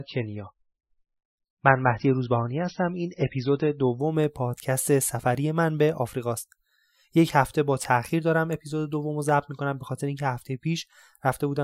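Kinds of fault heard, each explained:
Adaptive stream starting at a low bitrate: for the first 4 s the speech sounds dull and muffled, with nothing above 6 kHz and stronger codec artefacts. At 4.0 s the treble and clarity return abruptly, with no gap in the sound. The player began on a lean version of the stream so it could start quickly, then switched to a richer one once it had gauged the connection. The change in sound fits MP3 at roughly 17 kbit/s stepping up to about 128 kbit/s.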